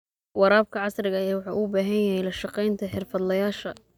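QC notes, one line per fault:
No audible faults; the recording holds steady and intact for its full duration.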